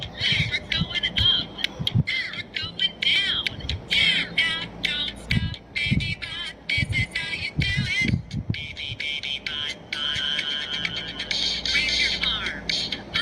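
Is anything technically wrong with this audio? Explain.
No, nothing technically wrong can be heard in this audio. The sound holds steady throughout, with nothing that calls for correction.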